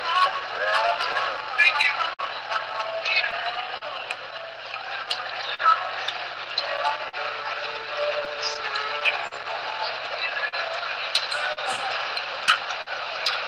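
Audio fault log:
Throughout: clock drift between sender and receiver. The sender runs about 4% slow, so the buffer keeps draining and the receiver repeats snippets, causing uneven timing hiccups.
0.87 to 12.89 s: scattered short gaps. About twenty lost or late packets, each patched by continuing the last sound; roughly half a second filled, longest about 50 ms.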